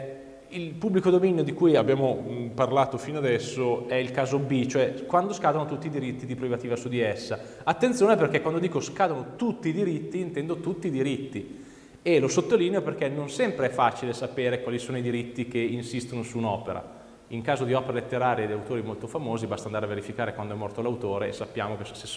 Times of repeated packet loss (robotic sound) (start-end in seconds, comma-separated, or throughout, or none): none